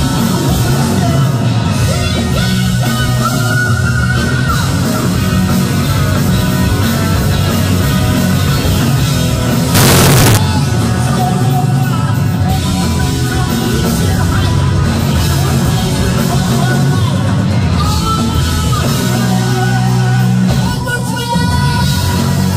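From 9.75 to 10.37 s the audio turns suddenly very loud and harsh, the waveform flattening into a near-square shape at an almost fixed, high level, with background noise lifted to match the foreground while pitch remains traceable. This is likely float read as integer: 32-bit float samples interpreted as 32-bit integers, so sign and exponent bits dominate each value.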